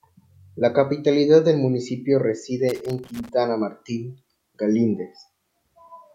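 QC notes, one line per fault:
2.69–3.29 s, loose connector crackle: a worn or dirty contact in the signal path intermittently makes and breaks for about 0.6 s, chopping the speech on and off, so it comes through as an irregular burst of scratchy crackle.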